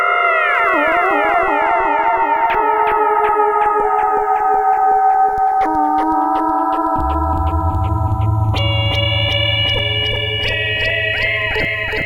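The two channels were captured on devices running from separate clocks that disagree by something like 40 parts per million, so the channels are drifting apart across the whole of this recording of everyday sounds. The offset between left and right grows steadily, reaching roughly 0.4 milliseconds by the end. When the channels are combined to mono, the comb-filter notches glide slowly through the spectrum, giving a gradual flanging sweep.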